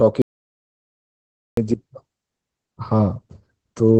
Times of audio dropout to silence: 0.22-1.57

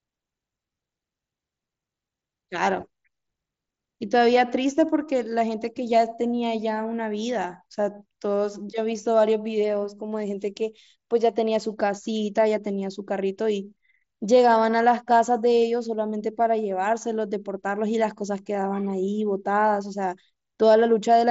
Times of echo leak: none

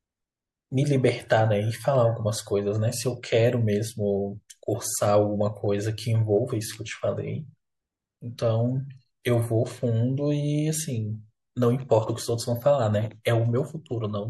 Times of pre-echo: 9.23, 13.23-13.25

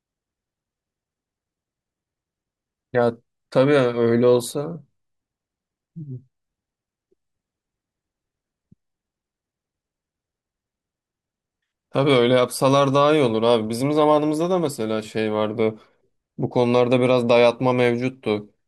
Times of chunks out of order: none

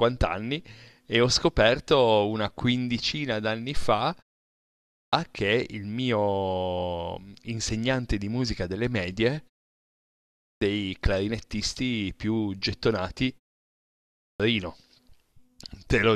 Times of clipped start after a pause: 4.57-5.13, 10.01-10.61, 13.80-14.40

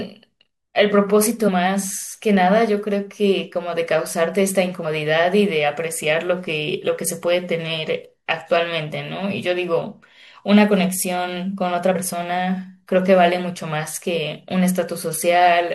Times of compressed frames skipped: 1.47, 4.84, 11.95

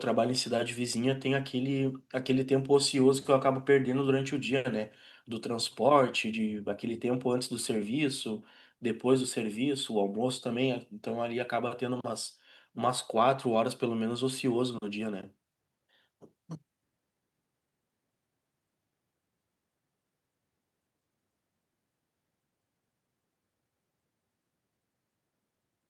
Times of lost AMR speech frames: none

